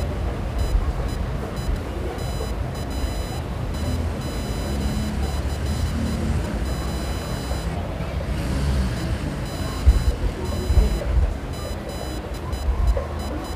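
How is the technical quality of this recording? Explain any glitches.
The recording has one persistent technical fault running under the whole clip.

Computer activity noise, present throughout: load changes in the computer disturb the ground shared with the audio circuit, adding a whining, buzzy chatter pulsing at around 1 kHz, roughly 20 dB below the wanted sound and varying with the machine's activity rather than with the sound itself.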